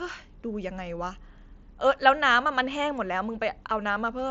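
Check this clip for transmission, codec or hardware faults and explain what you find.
One transmission fault is present, at 2.70 s: concealed Bluetooth headset packet loss. A single lost packet, a gap of about 7.5 ms, was bridged by repeating the best-matching stretch of the preceding waveform. It is nearly hidden rather than a silent dropout or click, and too short to build the buzzy held tone of a longer run. The mSBC headset codec adds a light graininess on loud sounds.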